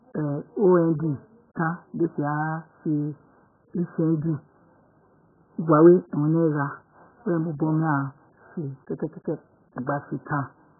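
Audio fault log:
Throughout: AAC compression, heavy damage, with nothing above about 1.7 kHz. The speech sounds dull and muffled, with a warbling, watery smear on sustained vowels and fizzy, garbled sibilants. This is most likely a very low-bitrate AAC-LC encode, around 8 kbps, where the encoder cuts the band hard and quantises what remains so coarsely that spectral holes open and shift from frame to frame. That frame-to-frame warble marks it apart from a plain low-pass filter, which dulls the sound without the churning texture.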